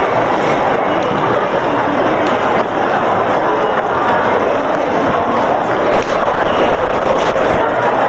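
Throughout the sound, the level ducks by about 5 dB under each loud moment. That is gain pumping, likely from input gain set far too high with a fast limiter pulling it down. Unlike steady compression, the level swinging with each loud moment gives it away.

From 5.92 s to 7.75 s a call bitrate drop takes hold. The Opus encoder falls from 40 to 9 kbps and stays at its lowest for 1.7 s, so the sound turns rough and watery against the already 8 kHz-limited band. It is a coarser coding texture rather than a gap or glitch, and clears when the rate recovers.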